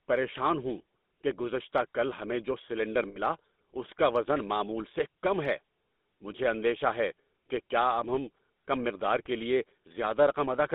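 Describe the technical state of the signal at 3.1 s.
At 3.1 s the signal sits inside a burst of lost GSM frames, running from 3.08 to 3.19 s just after "کل ہمیں جو سلنڈر". The decoder holds the last good frame's settings, so the sound smears into a rough, metallic ring. The span fits about four 20 ms frames, roughly 80 ms of lost data.

The same moment also carries the GSM full-rate codec's damage. It encodes at 13 kbps and the line is limited to about 200 Hz to 3.7 kHz. The vocal-tract model is driven by sparse, regularly spaced pulses, which gives the speech a plainly audible buzzy, gravelly roughness and nothing in the upper band.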